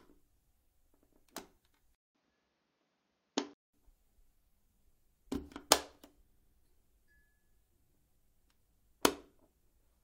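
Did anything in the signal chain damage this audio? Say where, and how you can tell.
Yes. Repeated frames at 1.76 s, 6.28–6.54 s and 8.26–8.39 s, at the codec, storage or network stage. Blocks of about 21, 85 and 128 ms replay, stuttering and lengthening the audio by about 21, 256 and 128 ms. The middle block plays four times.

Input switched to a poorer device, 1.95–3.73 s, at the capture driver stage. A 200 ms silence opens the span, then the sound turns dull with nothing above 6.8 kHz and a new noise floor about 40 dB down, at an unchanged level. This likely reflects a narrower-band microphone or headset profile.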